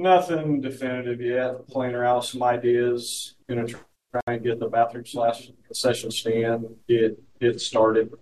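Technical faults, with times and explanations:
4.21 to 4.27 s, gap at a join of encoded pieces: a 68 ms silence cuts into continuous sound, which then resumes where it stopped, because separately encoded pieces were joined with their start delay and end padding left in. On a waveform it is a flat-line hole with slightly smeared edges; a spectrogram shows a blank vertical stripe.
7.01 s to the end, channel delay (comb filtering): one channel lags the other by a couple of samples, roughly 0.05 ms, which fits a 2-sample offset, and summing them to mono cancels shared content around 10 kHz, dulling the top end. A spectrogram shows a dark notch band near 10 kHz; the waveform looks unchanged.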